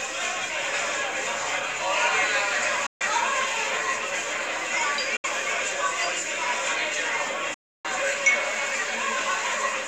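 The sound cuts to silence at 2.86–3.01 s (about 140 ms), 5.17–5.24 s (about 70 ms) and 7.54–7.85 s (about 300 ms), then resumes further along. This is likely a Bluetooth dropout, where late wireless packets were discarded.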